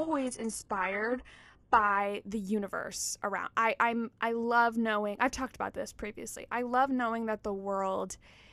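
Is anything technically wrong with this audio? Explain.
Yes. The first 2.0 s of this speech are an adaptive stream starting at a low bitrate. The player began on a cheap rendition to start quickly, then stepped up once it had gauged the connection. Until then the treble sounds synthetic and smeared, with nothing above about 11.5 kHz, which points to a high-efficiency codec near 12 kbit/s. At 2.0 s, just before "the universe around I", the sound jumps to full clarity, fitting a switch to roughly 96 kbit/s. Unlike a rebuffer or dropout, the change happens with no gap or stall.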